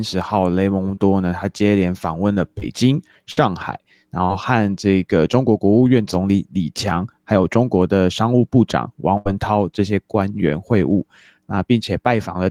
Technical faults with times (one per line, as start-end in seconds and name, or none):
0.95-0.99 short concealed packet loss
2.59-2.64 short concealed packet loss
3.32-3.39 burst of packet loss
4.25-4.31 short concealed packet loss
9.17-9.27 burst of packet loss